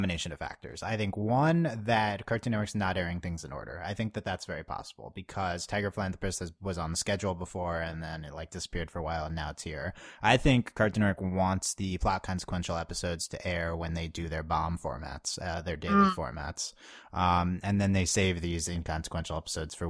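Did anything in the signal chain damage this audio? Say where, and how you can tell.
No, nothing in the signal chain has damaged this speech recording, and no stage has left any audible trace on it.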